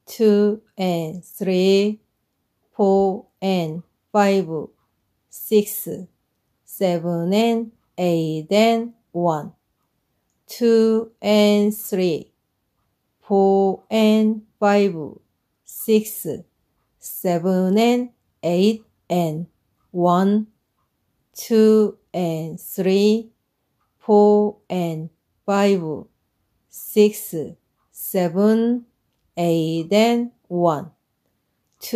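No dropouts, clipping, glitches or other playback faults can be heard anywhere in the audio.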